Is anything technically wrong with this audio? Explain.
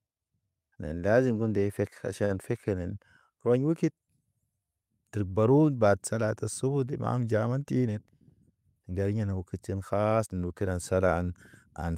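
Yes. At 2.25 to 2.32 s there is a short stall from a late packet: a packet arrived late and the jitter buffer ran dry. The receiver stretched the preceding sound by about 49 ms, then resumed where it left off, so nothing is lost. A sound is held slightly too long, with a slight buzz or dip, and everything after runs 49 ms later.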